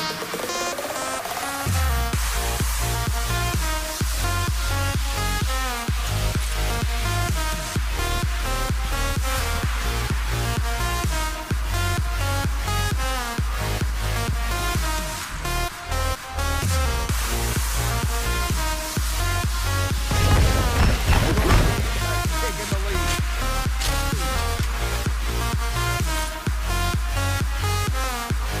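At three points the recording side likely failed to collect its audio before the hardware overwrote it, a dropped buffer (overrun), so a short stretch vanished and the sound on either side was spliced together with no gap. At 0.4 s the audio jumps ahead by roughly 70 ms, and at 13.68 s and 28.04 s it jumps by roughly 40 ms each time. Each loss is heard as a sudden skip forward in the sound rather than as a silence.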